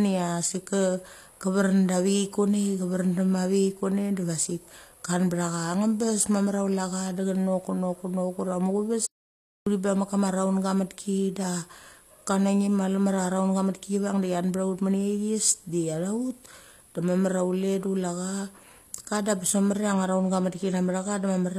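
From start to end, the speech carries the sound of HE-AAC compression, likely at a low bitrate near 24 kbps. The treble is rebuilt from lower bands rather than kept. S sounds come out gritty and metallic. The damage is plainly audible, and nothing reaches above 14.9 kHz.

At 9.06 s the audio drops out to silence for about 0.61 s. This is a dropout to silence, likely from a lost input while the recorder kept writing silence. No room tone remains. Sound returns at 9.67 s with "bang mek kama".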